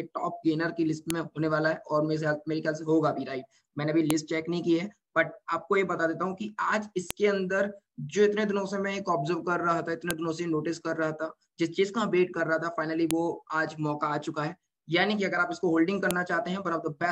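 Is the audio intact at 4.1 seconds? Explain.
No. At 4.10 s there is a file header played as audio: a WAV header left in place where separate pieces were joined. Its few dozen bytes are read as sample values, producing a brief, sharp, loud click that ignores the surrounding sound.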